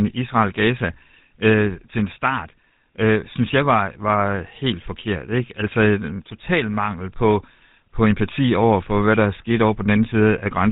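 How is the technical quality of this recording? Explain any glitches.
The quality's pretty rough, and it's one problem running the whole way through. From start to finish the speech has that GSM full-rate codec sound. It's plainly audible, and the character fits the old 13 kbps GSM full-rate stream. That codec rebuilds the voice from a vocal-tract model driven by a sparse, regularly spaced pulse train, so the texture comes out buzzy and gravelly. It also throws away everything above 4 kHz, which leaves the whole thing boxy and dull.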